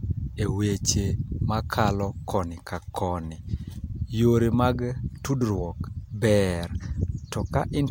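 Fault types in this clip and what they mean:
Nothing in the speech stood out as a fault on listening.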